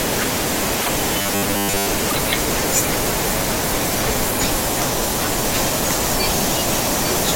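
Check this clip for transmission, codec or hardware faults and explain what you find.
Two kinds of fault appear in this speech clip: a broken MP3 bit reservoir at two points and a stretch of robotic sound from repeated short buffers.

At 0.81–0.89 s and again at 2.08–2.16 s, frames were likely dropped from the MP3 stream, breaking the bit reservoir. The frames that follow each gap reach back for data stored in frames that no longer exist and decode unrelated bytes instead. Each time, the speech jumps forward and the disruption lasts under a tenth of a second, about the span of a few 24 ms frames.

From 1.20 to 1.87 s, fresh audio likely reached the player too slowly, so it filled the gaps by looping its last short buffer while most of the real signal, roughly seven parts in ten, was skipped. The loop imposes a fixed 100 Hz buzz, which fits a buffer about 10 ms long. The speech turns hard and metallic, and its rhythm only loosely follows the talker.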